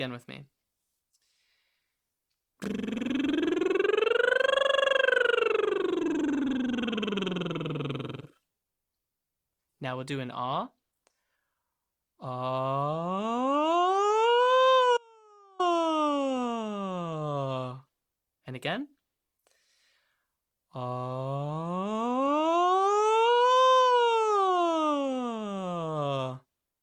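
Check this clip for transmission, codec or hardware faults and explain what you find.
One fault stands out: an audio dropout to a faint residue. From 14.97 s to 15.60 s, about 0.62 s, the sound cuts off abruptly in mid-flow. It is neither a pause nor a fade. The gap is not silent. A faint trace of the signal remains, roughly 35 dB below normal level. The likely cause is a brief loss of the wanted signal while the path after the break stayed live. The sound then returns just as suddenly.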